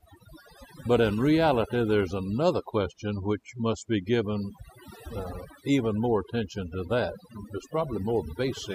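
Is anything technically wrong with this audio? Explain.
Yes. Overdone noise removal affects the whole recording. A noise reduction process was pushed too hard on a noisy original, so any frequency band close to its noise estimate gets pulled far down or removed outright. Quieter parts of the speech fall below that threshold and are stripped along with the noise. The gaps between phrases drop to near silence scattered with twinkling, chirpy specks.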